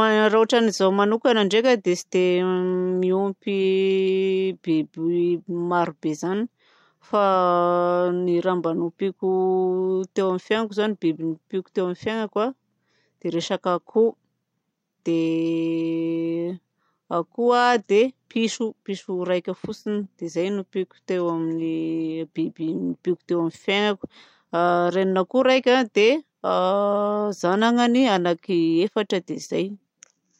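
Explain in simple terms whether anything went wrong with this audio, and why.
Nothing went wrong here.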